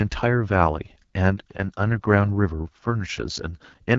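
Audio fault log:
throughout, AMR wideband (HD Voice) codec: the speech has the rough, raspy grain of AMR-WB at a low rate, with a bitrate that points to 8.85 kbit/s, one of the codec's two lowest modes, where the damage is plainly audible. Below 6.4 kHz the sound is rebuilt from a pulse-excited vocal tract model, and the band up to 7 kHz is filled with shaped noise, with nothing above 7.5 kHz. That noise-filled top band and the ceiling near 7 kHz set it apart from narrowband telephone coding, which stops near 3.4 kHz and sounds muffled rather than raspy.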